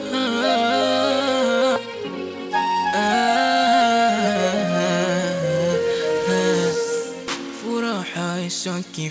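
At 1.76 to 1.78 s there is a skip ahead. About 0.7 s of audio was dropped while later audio was already queued, so playback jumps forward with no filler and the two sides are spliced almost directly. It sounds like an abrupt lurch where part of the sound simply vanishes. On a waveform, the envelope changes shape suddenly at the join. A spectrogram shows a vertical seam where the harmonic and formant patterns break off and restart mid-trajectory, with no silent gap between them.

Right after, from 1.86 to 3.08 s, comes a jitter buffer speed-up. Too much audio was waiting in the buffer, so the receiver trimmed it by repeatedly cutting out short chunks of one or a few pitch periods, about 0.15 s in total. The sound plays at 111% speed with its pitch unchanged and comes across as hurried. On a spectrogram, the harmonics stay at the same frequencies while events sit closer together in time. 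A zoomed waveform reveals periodic cycles missing at each splice. Throughout the clip, the call codec's band limit leaves nothing above 8 kHz in the spectrogram.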